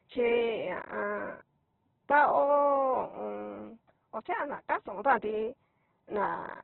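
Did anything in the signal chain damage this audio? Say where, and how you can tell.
Yes, at the codec stage, throughout: heavy Opus compression, likely at about 8 kbps. Speech sounds rough and grainy. A spectrogram shows a hard ceiling near 4.1 kHz with noisy, smeared bands below.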